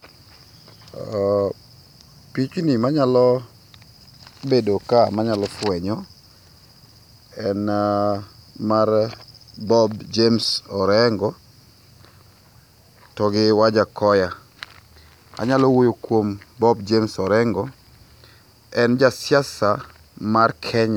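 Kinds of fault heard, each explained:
No technical faults can be heard in this speech recording. Nothing in the audio points to a fault of any kind.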